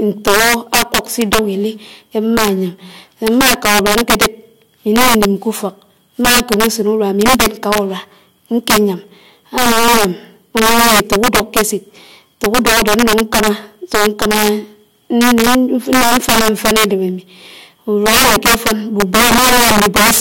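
All through the speech there's integer overflow: pushed about 11 dB too hot, roughly one sample in twenty wraps to the opposite sign, giving harsh cracks on loud peaks.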